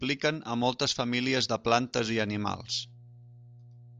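From 1.99 s to the end, mains hum appears: a steady 60 Hz tone from power-line coupling, roughly 20 dB under the speech, visible as a thin horizontal spectrogram line.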